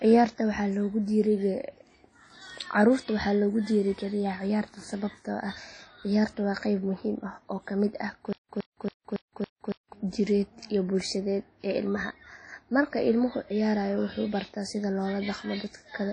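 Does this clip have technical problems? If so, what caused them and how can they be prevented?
Yes. WMA compression runs through the whole clip: the speech sounds ringing and washy, with hiss that swells and fades with the voice, and nothing remains above 10.1 kHz. This likely comes from a transform codec at a low bitrate, around 32 kbps, zeroing weak spectral detail. Encoding at a higher bitrate or with a more modern codec prevents it.

Stutter with silent gaps occurs from 8.33 to 9.93 s: a 114 ms fragment repeats five times at an even 279 ms pace, each followed by 165 ms of silence. A stalled player or stream likely replayed its last buffer on each retry, and the audio from that stretch is lost. Larger buffers and a more reliable network or storage path prevent it.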